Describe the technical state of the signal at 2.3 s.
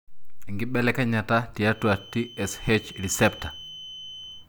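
At 2.3 s a feedback whistle is present. It runs from 1.65 s to the end of the clip. A thin, steady tone near 3 kHz sits about 20 dB below the speech, swelling and fading slowly in level. Likely cause: a loudspeaker-to-microphone loop held just at the edge of feedback.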